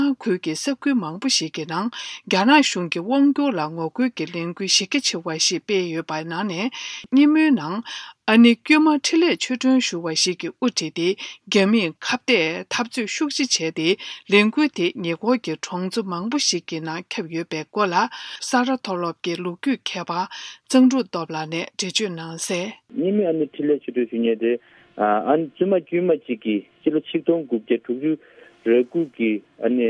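No technical faults can be heard anywhere in this audio.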